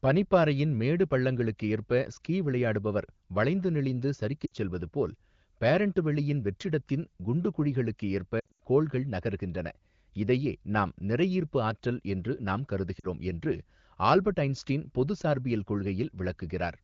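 A brief dip toward silence at 4.45 to 4.53 s, between "ஸ்கீ விளையாடுபவர் வளைந்து நெளிந்து" and "செல்வதுபோல்", then a longer broken stretch from 8.39 to 8.60 s before "கோள்கள் நகர்கின்றன", and a short dip at 12.99 to 13.05 s after "நிறையீர்ப்பு ஆற்றல் என்று நாம்". These are lost AMR speech frames. The decoder stretched the last good frame with falling gain to conceal each gap, over light AMR-WB wideband coding.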